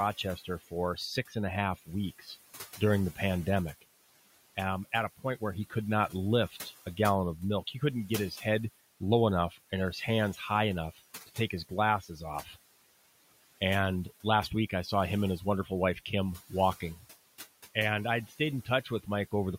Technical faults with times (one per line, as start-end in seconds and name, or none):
0.00-19.58 noise suppressor artifacts
0.37-3.19 speech cut by the noise suppressor
4.56-6.99 speech cut by the noise suppressor
7.73-8.42 speech cut by the noise suppressor
9.00-9.73 speech cut by the noise suppressor
10.97-12.57 speech cut by the noise suppressor
15.39-17.04 speech cut by the noise suppressor
17.74-19.33 speech cut by the noise suppressor